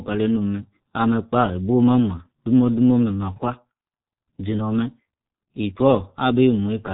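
From start to finish, the speech has passed through a G.723.1 codec, an early internet-telephony coder that models the voice in 30 ms frames at a very low bitrate, consistent with its 6.3 kbit/s mode. Nothing survives above 3.8 kHz, so the speech is muffled and dull. The slowly updated voice model smears fast changes, leaving a hoarse, buzzy quality and consonants that blur together. The damage is heavy throughout.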